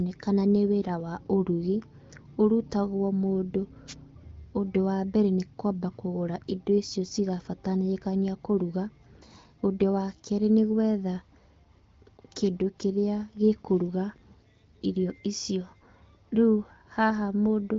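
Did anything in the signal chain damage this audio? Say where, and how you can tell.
Yes. The wireless microphone link caused two wireless microphone noise hits, brief bursts of static from 3.87 to 3.95 s, just after "ũrutagwo mũndũ", and from 12.44 to 12.49 s. The FM radio signal faded as reflections cancelled, so receiver noise briefly rose.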